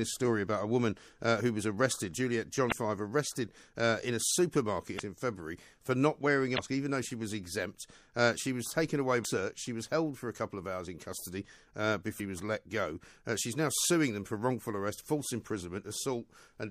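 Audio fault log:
throughout: MP3 compression, likely at around 64 kbps; audibly watery, swirly speech, seen on a spectrogram as flickering high-frequency holes.
2.68–2.73, 4.95–5.00, 6.55–6.59, 9.21–9.26, 12.19 s: damaged data in a compressed stream; corrupt frames make the decoder lose sync, giving brief chirps or blips visible as short spectral smears and waveform discontinuities.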